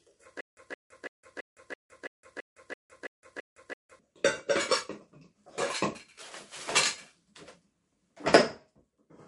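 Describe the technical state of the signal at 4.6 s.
At 4.6 s the audio shows MP3 compression damage, present across the whole clip rather than at this moment alone. Nothing is heard above 11.1 kHz, and the remaining content has a watery, swirling quality with smeared transients. This likely comes from an encoder starved of bits, consistent with a bitrate near 48 kbps: it truncates the top band at a fixed frequency and drops weak spectral lines that flicker in and out between frames.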